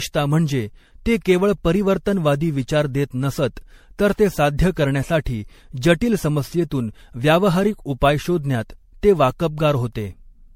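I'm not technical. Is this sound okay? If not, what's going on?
No. It likely went through generation loss: the recording was squeezed into MP3 and unpacked again around seven times over. Each round added fresh damage, so the speech sounds swirly, hollow and smeared for the whole clip, with the starts of sounds blurred.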